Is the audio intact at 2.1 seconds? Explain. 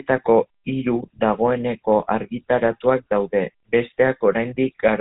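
No. At 2.1 s, as throughout the clip, the speech carries GSM full-rate codec damage: a modelled vocal tract fed by sparse, regularly spaced excitation pulses gives a plainly buzzy, gravelly roughness, consistent with a 13 kbps coder. A spectrogram shows nothing above 3.8 kHz.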